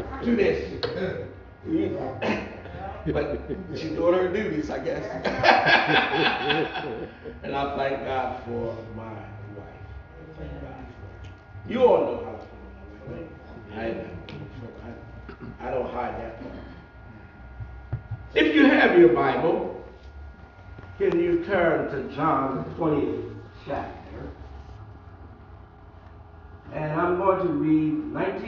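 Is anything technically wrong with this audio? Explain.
No, nothing technically wrong can be heard in this audio. There is no fault to point to at any moment in the clip.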